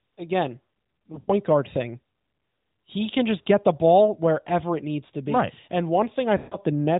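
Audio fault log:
1.12–1.31 s, lost AMR speech frames: about 100 ms gone in patches, longest run 80 ms, so the decoder stretches the last good sound and fades it before "guard thing".
6.38–6.57 s, lost AMR speech frames: a 140 ms dropout where the sound drags, decays toward silence, then comes back weak and rough.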